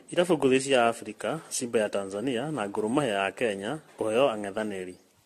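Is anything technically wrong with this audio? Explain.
Yes. The speech is degraded by generation loss from start to finish. It sounds swirly and hollow, with a smeared, watery texture in the upper range and consonant onsets that have lost their edge. The most likely cause is repeated lossy coding: around ten successive passes through AAC-LC at a rate that fits 64 kbit/s. Each re-encode quantises on a shifted frame grid, so noise and spectral gaps pile up beyond what one pass at that bitrate would produce.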